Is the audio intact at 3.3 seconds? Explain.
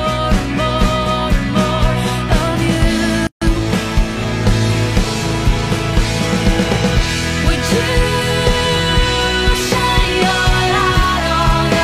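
No, not quite. At 3.3 seconds you're inside a gap at a join of encoded pieces, a dropout running from about 3.27 to 3.42 seconds, a gap of roughly 146 ms. It sounds like the audio was encoded in separate chunks and stitched together untrimmed, so one chunk's end padding and the next chunk's startup delay both got left in. You hear the sound cut off abruptly, slightly softened by the codec, then resume right where it stopped.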